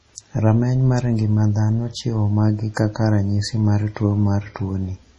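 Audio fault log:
Throughout, MP3 compression: the speech has nothing above 11.3 kHz and carries heavy coding damage, with a watery, swirling texture where weak frequency components drop in and out from one frame to the next. This is likely the result of an encoder starved of bits, which fits a bitrate around 32 kbps. With so few bits to spend, it cuts the treble at a fixed frequency and zeroes the quieter spectral detail it judges least audible.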